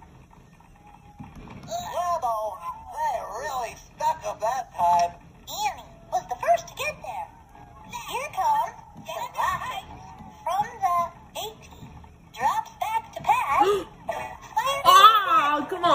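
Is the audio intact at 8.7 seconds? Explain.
Yes, at 8.7 seconds the audio is intact, with no dropout, click, distortion or other fault at that moment.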